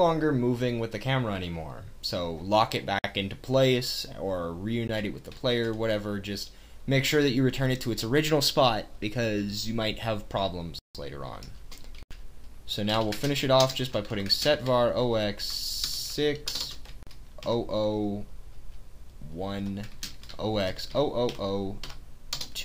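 The audio drops out to dead digital silence five times: at 2.99 s for about 52 ms, a brief tick at 4.88 s, at 10.79 s for 160 ms, at 12.03 s for 80 ms, and at 17.03 s for 40 ms. Each block of digital silence starts and stops with no fade. The longer ones sound like proper holes. That kind of hard zeroing points to the output buffer not getting filled in time.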